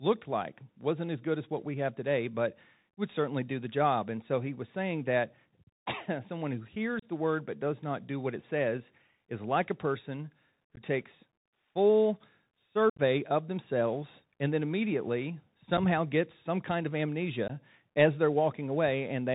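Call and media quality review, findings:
Bluetooth CVSD headset codec, full clip. Speech capped near 4 kHz, scratchy sibilants, grainy hiss under voice, loud bright syllables smearing. Narrowband 1-bit delta modulation at 64 kHz whose adaptive step can't track fast transients, which fits a 64 kbps SCO link.

Unconcealed Bluetooth headset packet loss, five dropouts. Abrupt holes and a brief quieter recovery: 6.99–7.05 s (30 ms gone); 10.76 s, between "is like a person" and "takes full" (15 ms); 12.90–13.00 s, before "of themselves and then", 82.5 ms lost across 90 ms, longest run 67.5 ms, rough chopped stretch; 15.77 s (7.5 ms); 17.48 s, between "gets some kind of" and "as they're" (15 ms). Voice packets dropped on the headset link and replaced with silence or idle pattern, no concealment. Patterns point to roughly one to ten packets per event.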